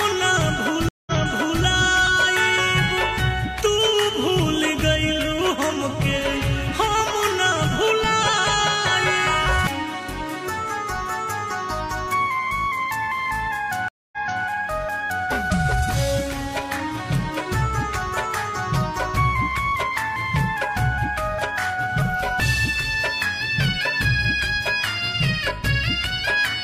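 At 0.89 s the audio cuts out for 180 ms, and when it returns at 1.62 s it starts about 0.56 s earlier than where it stopped. At 13.88 s a 239 ms silence follows, and it picks up again at 14.45 s, about 0.33 s back. Both are stream reconnects: the link dropped, and a fresh decoder restarted from resent data. Unlike a plain dropout, which just leaves a gap, each one replays material already heard.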